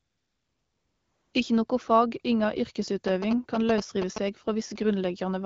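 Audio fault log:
0.00–1.33 s, AMR comfort noise: For the first 1.33 s no speech frames arrive, so the receiver fills the gap with synthetic noise built from a rough estimate of the background's level and spectral shape. The result is a steady, featureless hiss in place of the real room sound. A spectrogram shows a smooth, evenly shaded band with no texture or transient detail, ending abruptly where real frames resume. The waveform shows a flat, constant-amplitude noise floor.
3.08–4.18 s, GSM signalling bursts: Just after "noko fag inga", a nearby 2G phone in a signalling state transmits short groups of radio bursts. The audio circuitry rectifies them into a galloping dit-dit-dit of brief buzzes repeating at about 217 Hz, only a little below the speech level. A spectrogram shows vertical striping with harmonics stacked at 217 Hz spacing. The waveform shows clustered rectangular pulse trains riding over the speech.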